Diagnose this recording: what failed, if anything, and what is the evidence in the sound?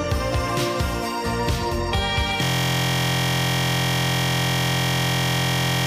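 At 2.43 s the driver or buffer stage fails with a system hang loop that lasts to the end. The host froze while the interface kept replaying its ring buffer, so one 23.22 ms slice repeats about 150 times. That length fits a 1024-sample buffer. At 43.1 Hz the repeats fuse into a steady buzz. The waveform shows identical periodic cycles, and the spectrogram shows evenly spaced horizontal harmonic lines at multiples of 43.1 Hz.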